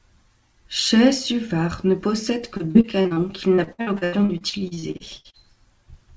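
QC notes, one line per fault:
2.57–3.19 s and 3.55–5.46 s, repeated packet loss (robotic sound): right after "ne possède", then again, short holes of up to 31 ms and later up to 88 ms recur, about 6 and 19 of them. Each is patched by repeating the preceding sound, so roughly a third of each stretch is filled in rather than dropping to silence as a plain dropout would. The band stays capped near 8 kHz, consistent with the G.722 call path.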